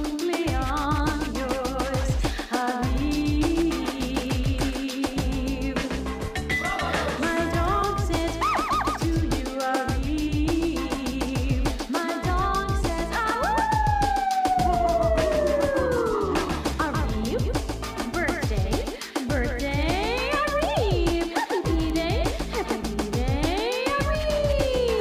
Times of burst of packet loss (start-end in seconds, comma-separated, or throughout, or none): none